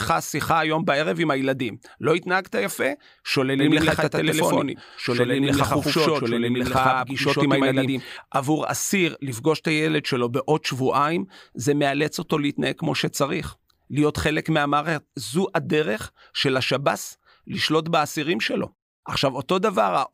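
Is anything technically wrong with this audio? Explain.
Yes. From 3.59 to 8.17 s there is a doubled audio track: a second, equally loud copy of the speech trails the original by about a tenth of a second, likely from a slower capture path or a misaligned edit. It sounds like a clean slapback with no room tail, starting and stopping abruptly. On a spectrogram every full-band feature appears twice, shifted slightly in time; the waveform shows overlapping, thickened envelopes.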